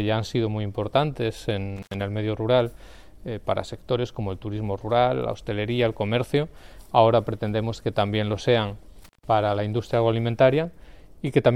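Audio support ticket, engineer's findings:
Intermittent contact, two dropouts. First at 1.76–1.94 s, line open for about 88 ms; second at 9.03–9.24 s, open for about 153 ms. Sound cuts out with crackle on the edges each time, like a plug or cable connection briefly lifting and re-seating. Probable component: a loose jack or a worn cable near the connector. I'd reseat everything and wiggle-test the leads before digging anywhere else.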